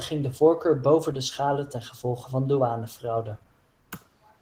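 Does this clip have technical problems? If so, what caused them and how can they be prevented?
Yes. Opus voice compression runs through the whole speech clip. The voice has a hoarse, slightly robotic grain from coarsely coded excitation, which fits a low-rate hybrid setting around 16 kbps in 20 ms frames. The content above 8 kHz comes through as a thin, roughly coded layer rather than being cut off. That sets it apart from a plain low-pass or band-limited fault, where the top simply disappears and what remains stays clean. Encoding at a higher bitrate, or leaving the source uncompressed, would prevent it.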